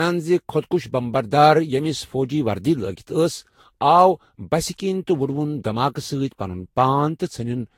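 From start to end the speech carries generation loss. It sounds swirly and hollow, with smeared consonant attacks. That degradation is heavier than a single low-rate encode would give, and it likely comes from the audio being re-encoded around five times with a lossy codec. The character points to Vorbis at roughly 60 kbit/s. Each pass requantises on a shifted frame grid, so noise and spectral holes accumulate.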